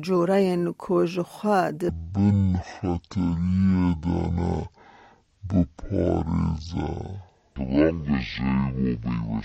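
From 1.89 s to the end, a section at the wrong speed plays at 0.5x, likely from a clock mismatch, dropping pitch about ten semitones; spectrogram harmonics compress downward, waveform stretches.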